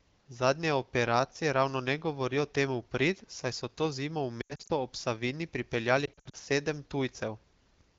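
Lost AMR speech frames at 4.42–4.72 s and again at 6.06–6.36 s break up this wideband speech recording. In each burst, about 160 ms of frames scattered across 280 ms fail their checks. The decoder fills the gaps by repeating the last good pitch and vocal-tract settings at falling gain, so the speech smears and dips, fading quickly on the longest runs (80 ms and 60 ms) before returning briefly rough.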